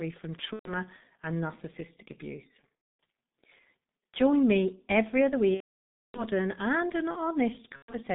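Throughout the speech, the G.723.1 codec at 6.3 kbit/s confines the audio to about 150 Hz–3.7 kHz and leaves it heavily muffled and hoarse. Unlike plain band-limiting, the consonants smear. VoIP packet loss concealed by the speech codec occurs at 0.53–0.74 s before "and narcissistic abuse", at 2.99 s after it, at 5.54–6.24 s between "me every other" and "and an", and in scattered bursts over 7.76–7.95 s. These are heard as briefly stretched, fading extrapolated sound that then mutes, and the speech stays weak briefly afterwards.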